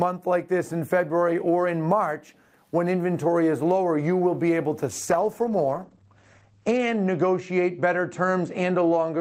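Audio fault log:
4.91–9.21 s, call bitrate drop: the bandwidth estimate fell, and the sound points to the encoder being cut from roughly 40 to 12 kbps. Coarser coding makes the sound rough and watery, and the top end narrows from 20 kHz to 8 kHz, muffling it, with the lowest quality lasting about 2.07 s.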